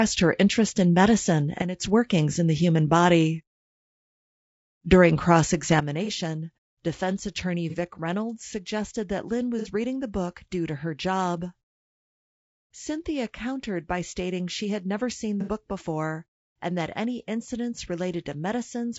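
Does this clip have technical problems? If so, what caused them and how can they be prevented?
Yes. The speech carries three kinds of fault.

Low-delay AAC compression runs throughout. The voice sounds rough and grainy, with noise filling the gaps between harmonics and a thin, synthetic top band. The likely cause is AAC-ELD at a bitrate that fits about 32 kbps: short frames resolve pitch harmonics poorly and spend bits inefficiently. Unlike steady background hiss, this grain follows the voice and vanishes in pauses. Encoding at a higher bitrate, or with a codec suited to speech at this rate, prevents it.

A sudden gain jump drops the level by about 11 dB from 1.62 to 1.8 s, between "her interest in medicine" and "workings in the human". A second drop of about 9 dB begins at 5.8 s and holds to the end. Voice and background noise fall together in a single step, with no ramp. A compressor or fade would glide or pump instead. 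Applying gain changes with a short ramp prevents the step.

AAC frame loss with concealment appears at 6.05 s and 7.70 s, each lasting about 30 ms, which fits one lost frame. It appears again at 9.59 s and 15.41 s, each lasting about 60 ms, which fits two frames. The decoder rebuilds each gap from the last good spectrum, so the voice briefly smears into a noisy, phasey patch. A plain dropout would leave silence instead. Forward error correction or retransmission on the link prevents this.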